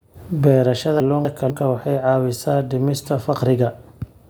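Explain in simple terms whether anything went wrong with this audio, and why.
Something did go wrong, around 1.0 to 1.5 seconds, just before "waxay caawisaa dhimista". That half-second of speech gets scrambled because of chunks out of order. The audio travels in quarter-second pieces, and one piece arrived a step late, so it played after the piece that should have followed it. Nothing's missing, but the two pieces swap places, which makes that moment sound jumbled.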